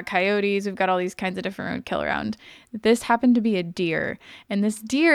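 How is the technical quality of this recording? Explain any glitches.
Nothing stood out on listening to this recording; there were no glitches to explain.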